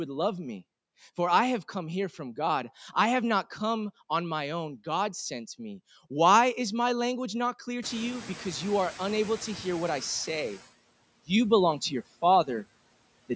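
Throughout the speech, noise suppressor artifacts are present. The suppressor lowers each frequency band it judges to be steady background by about 21 dB, frame by frame. The noise drops away between phrases and swells back beneath the speech.

Around 8 s the room noise suddenly climbs by about 24 dB, and the noise suppressor is heard catching up. Its noise estimate lags, so from 7.82 to 10.06 s the louder background passes with only about 7 dB of reduction, then sinks over those 2.24 s as the estimate adapts.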